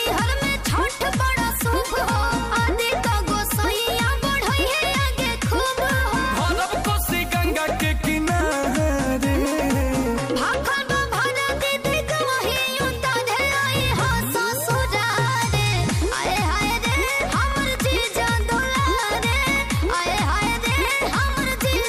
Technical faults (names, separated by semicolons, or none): train of clicks